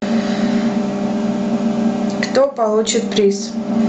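Gain pumping runs throughout the speech, a swing of around 20 dB, likely from gain set far too high with a fast limiter clamping it down, squashing loud and soft together.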